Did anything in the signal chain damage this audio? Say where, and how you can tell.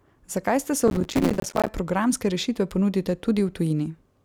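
Yes, at the driver or buffer stage. Right after "ste se", from about 0.88 to 1.68 s, the speech picks up a gritty, tearing processor overload crackle. The processor couldn't fill its buffers on time, and dozens of deadlines went by in a row. Each miss left a hard-edged dropout to silence, and the spacing of the clicks fits buffers of around 5 ms. Strung together, those tiny holes make the rough crackle, which stops once the load clears.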